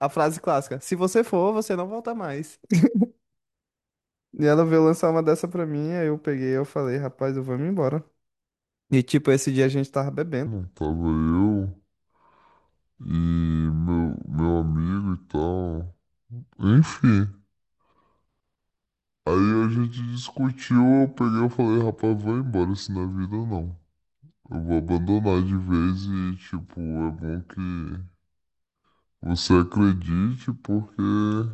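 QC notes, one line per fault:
10.46–31.53 s, wrong sample rate: from here to the end the speech plays at 0.667 times its proper speed and about 7 semitones lower, sounding slow and deep. Speed and pitch drop together, which fits 48 kHz material being played at 32 kHz without conversion.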